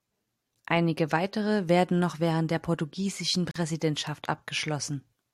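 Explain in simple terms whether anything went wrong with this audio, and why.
At 3.51 seconds, just after "noch während der portugiesischen", the speech drops into a 43-millisecond silence. This is a gap at a join of encoded pieces: separately encoded sections were spliced untrimmed, so each encoder's leading silence and end padding remained, leaving a brief hole before the speech resumes.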